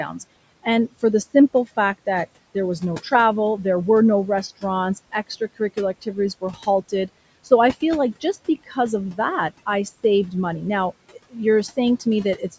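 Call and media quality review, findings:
Speech cut by the noise suppressor, 5.12–7.09 s after "there were no restaurants", 8.2–8.77 s between "I feel like" and "of that I saved", 11.12–11.36 s. Quiet speech is misclassified as noise and gated down about 16–20 dB, swallowing a few hundred milliseconds of speech.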